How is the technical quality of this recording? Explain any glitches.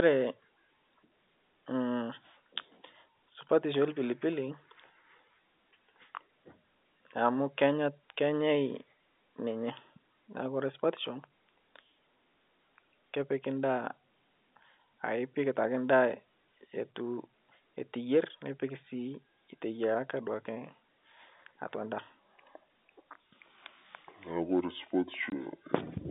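Two glitches stand out, both in the last few seconds of this telephone-band speech recording, which carries the narrow 200 Hz to 3.7 kHz line band of G.711 coding.

Section at the wrong speed, from 22.19 s to the end: the audio runs at 0.62 times its recorded rate, so pitch drops by roughly seven semitones and the speech turns deep and drawn out. The likely cause is playback or editing against the wrong clock. A pitch-shift effect would lower the voice without stretching it, but here timing and pitch sink together.

Packet loss filled with silence, from 25.30 to 25.32 s: a single hole of about 20 ms, which fits one lost 20 ms packet, where the receiver inserted pure silence instead of concealing the gap. The abrupt cut-out and restart give the gap hard edges. A codec dropout smoothed by concealment would fade or repeat the preceding sound, whereas this gap is dead quiet with hard edges.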